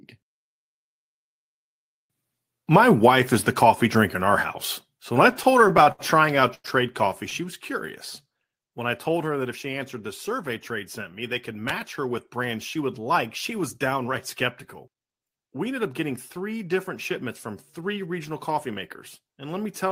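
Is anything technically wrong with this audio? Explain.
Yes, there's a patch of repeated stalls, a stutter, from about 5.31 to 6.66 s, right after "when I". Packets were showing up late or slower than playback, so the jitter buffer kept running dry, around a dozen times. Each time the receiver stretched the last bit of sound to cover the wait, the longest about 96 ms, fading it on the longer ones. Nothing actually drops out, but about a fifth of that stretch is filler, so it drags and hiccups.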